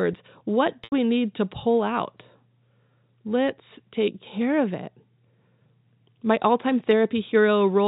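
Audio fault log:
0.84–0.92 s, packet loss with pitch repetition: the sound briefly turns into a held, buzzy tone that fades away, then the speech returns through a short cross-fade. About 80 ms went missing, which fits four 20 ms packets. The receiver bridged the gap by repeating the last pitch period.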